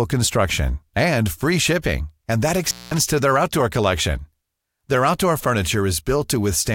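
A loose cable or plug briefly lost contact at 2.64 to 2.98 s, after "free shipping and that": the speech drops out for about 207 ms, with crackle at both edges.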